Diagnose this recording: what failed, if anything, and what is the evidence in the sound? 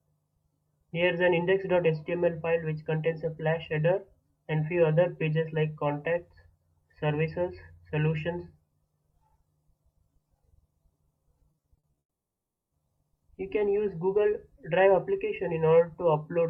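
Repeated packet loss (robotic sound), 11.51 to 11.99 s, at the network stage. Eight short holes, none longer than 40 ms, are patched by extending the preceding sound. That totals 180 ms, or 37% of the stretch, leaving choppy, robotic audio with pieces missing.

From 11.99 to 12.73 s the audio stops. A brief carry-over of the last sound gives way to 690 ms of silence, then the sound resumes without the missing 720 ms. This is likely a long network dropout, where the receiver's concealment ran out.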